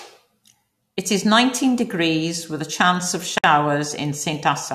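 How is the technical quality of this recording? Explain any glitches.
The recording has one glitch: a gap at a join of encoded pieces from 3.38 to 3.44 s, just after "with a chance of". Two separately encoded segments were spliced without trimming the encoder's start delay and final-frame padding, leaving about 57 ms of silence. It cuts in with smeared edges, then the speech resumes where it stopped.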